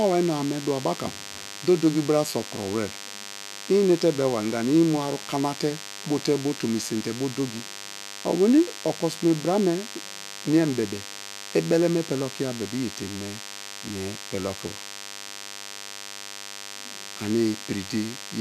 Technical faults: DECT cordless phone buzz

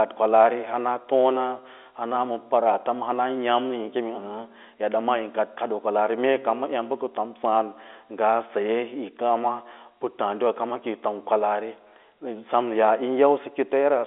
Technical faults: none

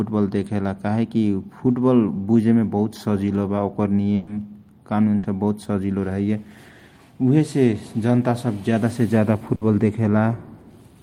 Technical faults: burst of packet loss

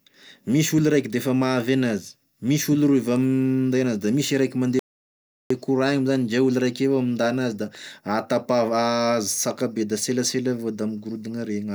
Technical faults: playback stall

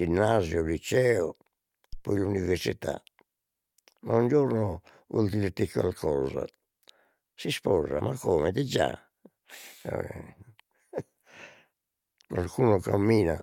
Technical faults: phantom power thump

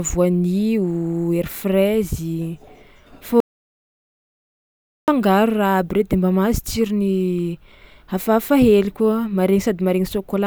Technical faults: audio dropout to silence

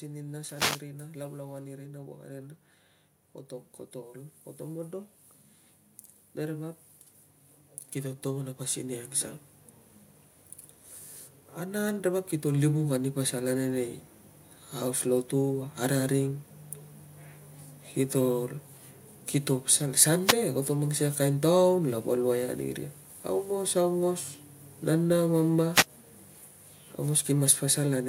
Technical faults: wireless microphone noise hit; automatic gain rising

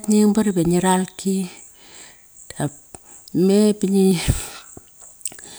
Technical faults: dropped buffer (overrun)

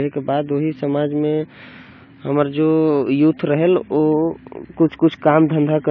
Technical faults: AAC compression

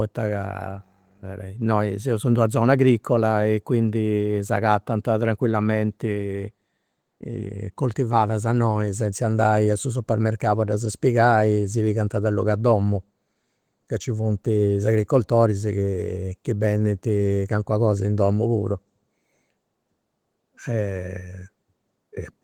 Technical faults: none

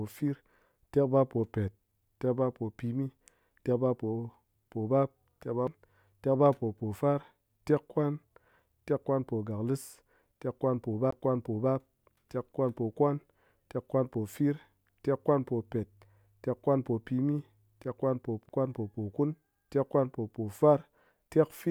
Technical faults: CD skip

